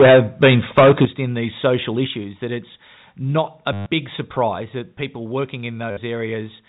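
From the start to 1.05 s the speech has a harsh, crackling edge on every loud syllable. This is microphone overload. Peaks run about 11 dB past the converter's limit, and a large share of samples have flattened tops. The input volume was likely set too high.

At 1.05 s, just before "in these social", voice and background drop by about 9 dB at once. This is the microphone volume stepped down. A smaller step of about 4 dB follows at 2.07 s, between "in these social" and "that it's not a". A third step of about 3 dB comes at 4.62 s, right before "that people working". Each drop is sudden, not a fade.

From 3.73 to 3.86 s there is packet loss with the last packet repeated. The sound freezes into a robotic stutter for 130 ms. The repeats buzz near 100 Hz, which fits 10 ms packets. A shorter 60 ms stutter follows at 5.91 to 5.97 s. All of this sits on a G.711 telephone band that cuts off at 4 kHz.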